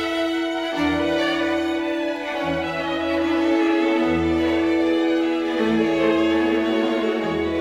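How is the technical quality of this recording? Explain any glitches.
No glitches, dropouts or other technical faults can be heard anywhere in the recording.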